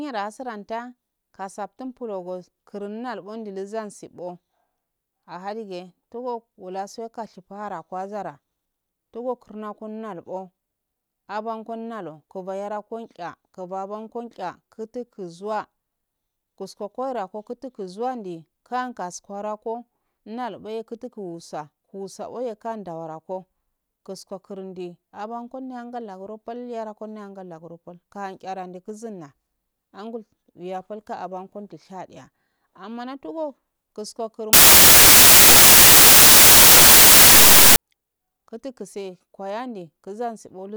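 Samples built from the wrong bytes, from 34.53 to 37.76 s, turn the speech into a loud, harsh broadband noise. For these 3.2 seconds the reader assembles each sample from mismatched bytes, either shifted by one position or taken in reversed order, so the rapidly fluctuating low-order bits end up as the dominant part of every value. The result is dense, harsh noise.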